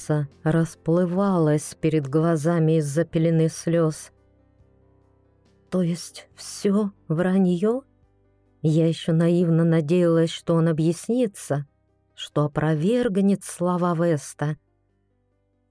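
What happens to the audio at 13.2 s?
Nothing goes wrong at 13.2 s; the audio carries on intact through that moment.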